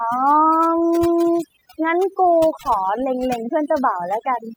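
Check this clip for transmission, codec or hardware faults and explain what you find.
Overdone noise removal runs throughout this speech. An overly aggressive suppressor mutes bands near its noise estimate. Background drops and breaks into twinkling specks.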